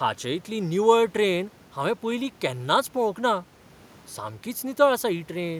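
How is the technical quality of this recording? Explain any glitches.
No glitches; technically sound throughout.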